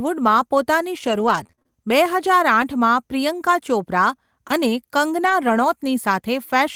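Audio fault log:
1.07–1.68 s, repeated packet loss (robotic sound): choppy stretch with pieces dropping out. There are six short holes, the longest 24 ms. The decoder bridged them by stretching the preceding sound for about 110 ms, roughly a fifth of the span, while 120 ms went missing outright.
2.62 s and 5.26–5.32 s, lost packet rebuilt from error correction: no dropout, just brief rough, noisier patches of 20 ms and then 40 ms. These fit one lost packet, then two, each replaced by the coarser low-bitrate copy carried in the packet that followed.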